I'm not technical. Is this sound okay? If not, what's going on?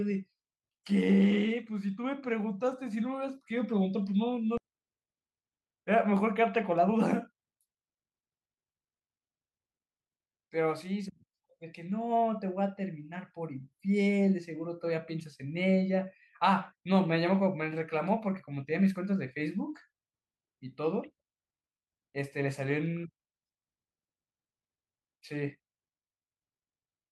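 No. At 4.57 s there is a skip ahead: about a second and a half of speech is dropped, and playback jumps straight to later speech with no gap. From 4.67 to 5.59 s and again from 6.42 to 9.07 s, jitter buffer speed-up makes the speech run about 14% fast at normal pitch as tiny slices are trimmed to catch up, so it sounds hurried.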